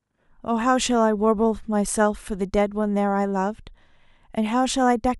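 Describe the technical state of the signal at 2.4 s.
At 2.4 s the speech signal is intact, with no audible dropout, distortion or other fault at that point.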